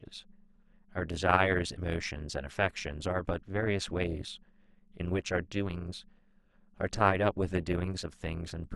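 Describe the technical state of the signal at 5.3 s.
At 5.3 s the speech carries a metallic buzz with extra tones around each sound, and it runs through the entire clip rather than starting or stopping here. This is overlap-add ripple: the signal was split into windowed frames and rebuilt with an overlap whose windows fail to sum to a constant gain. Level dips and swells by about 11 dB once per frame, at a rate of around 200 Hz.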